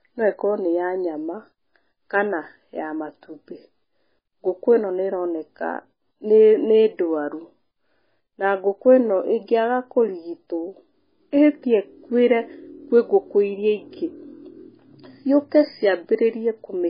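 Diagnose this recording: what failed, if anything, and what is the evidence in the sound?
The codec stage most likely failed through heavy MP3 compression, starved of bits throughout. The speech has nothing above 5 kHz, and weak spectral detail flickers between frames, giving a watery, swirling texture with smeared onsets, consistent with a bitrate around 16 kbps.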